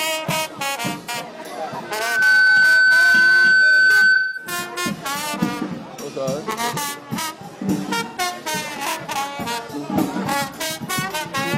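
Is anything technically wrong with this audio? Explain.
Yes, there are two kinds of fault: three short dropouts patched by the decoder, and a sustained feedback squeal.

AAC frame loss with concealment occurs at 1.04 to 1.09 s (about 43 ms), 4.14 to 4.51 s (about 213 ms) and 8.07 to 8.18 s (about 85 ms). The lengths point to one, five and two lost frames. Each time, the decoder covers the gap by reusing the last good spectrum with randomised phase, so the sound turns briefly smeared and hissy. On a spectrogram these show as short blurred vertical bands, and the longest one fades in level toward its end.

The loudspeaker feedback squeal runs from 1.84 to 4.72 s. The microphone picks up its own loudspeaker output, and at 1.5 kHz the loop gain exceeds unity. That tone grows by itself in under half a second and then holds at roughly 10 dB above the rest of the sound. On a spectrogram it is a bright horizontal line at 1.5 kHz. 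On the waveform the envelope swells and thickens. The 4.14 s dropout falls inside this stretch.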